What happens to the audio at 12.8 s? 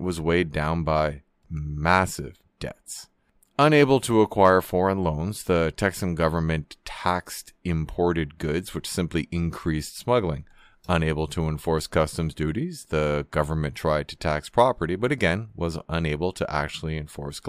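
Nothing goes wrong at 12.8 s: the audio runs through that moment intact, with no dropout, click or other fault.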